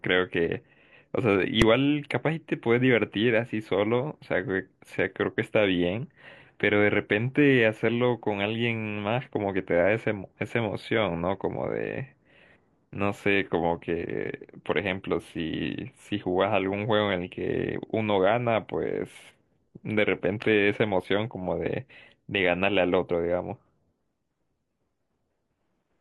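A single sharp bang cuts through this speech recording at 1.62 s. It is very brief and very loud, with no separate start and end pops. This is invalid numbers at full scale. A calculation in the processing chain produced infinite or invalid values, and the output was pinned at one extreme value for one processing block of about 1.3 ms, which fits a 64-sample block. Because the block is so short, the jump to that extreme and the drop back merge into one click.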